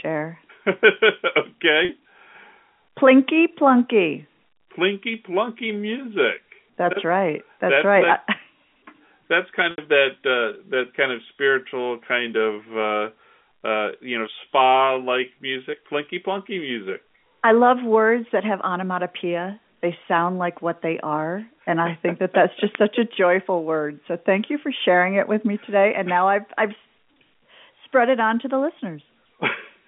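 At 1.85 s and again at 9.71 s the speech shows packet loss with pitch repetition. About 40 ms and then about 70 ms of audio went missing, and the receiver filled each gap by repeating the last pitch period. The shorter gap gives a brief held, buzzy tone, while the longer one fades into silence before normal speech resumes with a short cross-fade.

At 22.75 s, between "think that that's just" and "such a joyful word", an uninitialised buffer plays. A block of about 0.67 ms, which fits a 32-sample buffer, was read from stale memory, giving a very short, loud click of digital noise over the G.711 telephone line.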